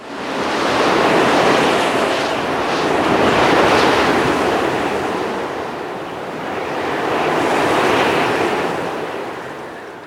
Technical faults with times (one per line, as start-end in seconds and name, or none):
none